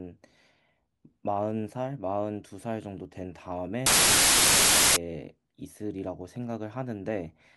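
Speech, with a wrong sample width fault from 3.86 to 4.96 s. Loud noise buries the voice, which runs 1.33 times fast and high. That speed shift sets it apart from byte-order errors, and fits packed 24-bit data read as 32-bit.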